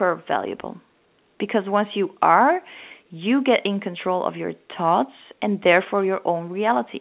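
Nothing's technically wrong with this speech recording: it's simply carried over A-law telephone coding, so the sound tops out at 4 kHz as that format always does, and there's nothing else to point at.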